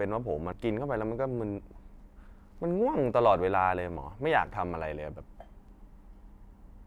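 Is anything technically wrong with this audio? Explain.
Yes. A CD skip occurs at 0.52 s in this speech recording. The disc player's laser was knocked or thrown by a surface flaw onto another turn of the spiral track, so it lost its place. The player muted for only a few milliseconds and then resumed reading from a different point on the disc. The result is a short tick followed by an abrupt discontinuity, as the speech suddenly carries on from somewhere else.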